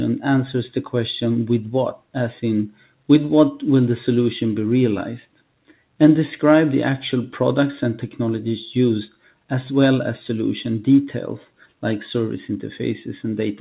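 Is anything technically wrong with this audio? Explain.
Yes. There are three spots where sound gets cut by the noise suppressor: 2.70 to 3.09 s, 9.10 to 9.33 s, and 11.49 to 11.73 s. In each, the suppressor decided part of the audio was noise and pulled it down harder than everything around it, by about 12 dB in the first and about 11 dB in the other two. You hear it as brief dips or clipped-off tails, each lasting a fraction of a second. The top end stopping near 4 kHz is just the narrowband call codec, which fits G.711 A-law.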